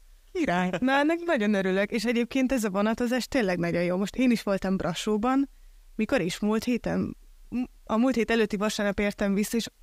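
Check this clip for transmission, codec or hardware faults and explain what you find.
No faults detected in this speech.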